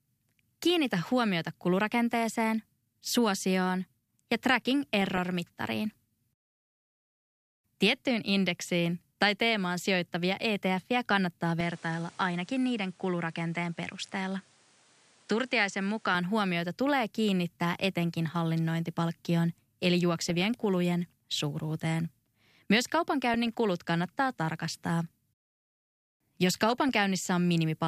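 DAB burbling first appears from 5.02 to 5.26 s. Bit errors from weak DAB reception have got past the error correction and into the MP2 audio data. The corrupted sub-band values come out as short blips of noise in narrow frequency regions, while the rest of the band plays on. That sets it apart from a dropout or packet loss, where the audio gaps or repeats instead.

From 11.61 to 16.15 s the sound abruptly narrows. Nothing is left above 10.8 kHz, the level falls by roughly 5 dB, and a new background noise appears about 30 dB below the speech. The sound then returns just as suddenly. Neither change has a silent gap. These shifts in bandwidth, level and noise arrive together, which points to the likely cause: the input was switched to a poorer device and then back. A plain low-pass filter would cut the top of the band but would not change the level or the noise.

DAB burbling returns at 20.25 to 20.54 s, 23.32 to 23.47 s and 26.55 to 26.89 s, with the same sub-band blips as before.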